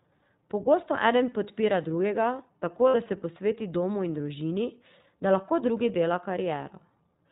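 The whole recording passes through the iLBC codec. Nothing above 4 kHz survives. The speech sounds plainly rough and slightly synthetic, which fits iLBC's 15.2 kbps mode.

From 2.88 to 2.96 s, lost iLBC frames leave a gap of about 60 ms, just before "da se posveti domu". The decoder repeats the last pitch cycle with noise, giving a brief buzzy held vowel.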